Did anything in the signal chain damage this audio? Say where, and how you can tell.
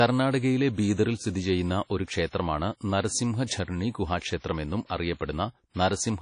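Yes. The damage sits at the codec stage, and it runs through the whole speech clip. Nothing is present above 10.1 kHz, so a spectrogram shows a flat ceiling where the top band is simply empty. The coding noise is plainly audible as a washy, ringing hiss that swells and fades with the signal. On a spectrogram that hiss shows as smeared, blocky texture around the speech. The likely cause is low-bitrate WMA compression, and the sound fits a bitrate around 32 kbps.

A pre-echo runs from 4.86 to 4.90 s, right after "നരസിംഹ ഝർണി ഗുഹാക്ഷേത്രം എന്നും". It spreads over 41 ms ahead of an attack. The transform coder spreads its quantisation error evenly across each block. Here the attack fell late in a block, so noise sized for the loud onset also filled the quiet gap before it. On the waveform, a low fuzz creeps in before the transient. On a spectrogram, broadband smear leads the onset and softens its edge.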